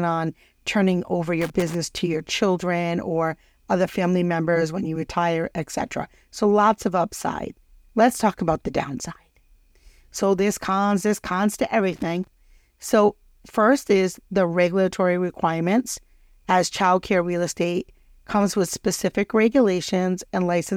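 A worn or dirty contact somewhere in the signal chain is making and breaking as it shifts, producing loose connector crackle twice in the speech. From 1.41 to 1.75 s, after "on turning over" and before "to your children or", the feed is chopped into a ragged burst of scratching. It returns from 11.93 to 12.27 s, just after "cons there's cons to", as another irregular third-of-a-second crackle.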